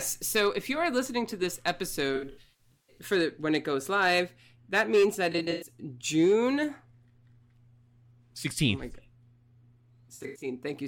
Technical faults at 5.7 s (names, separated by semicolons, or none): AAC frame loss with concealment